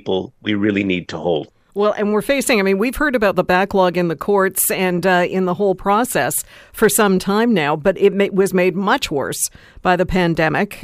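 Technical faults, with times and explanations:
No technical faults are audible in this speech recording.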